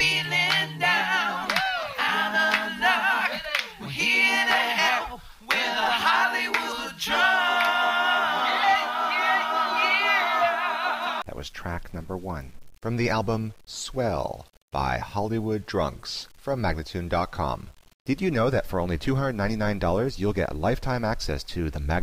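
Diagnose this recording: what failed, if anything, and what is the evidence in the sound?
Low bit depth without dither runs the whole way through: grainy distortion tracks the sound, roughly 35 dB down. Likely an 8-bit sample-format conversion that rounded without dither.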